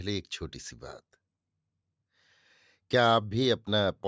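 No technical faults are audible.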